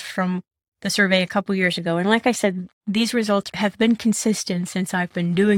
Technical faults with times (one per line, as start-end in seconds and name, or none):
none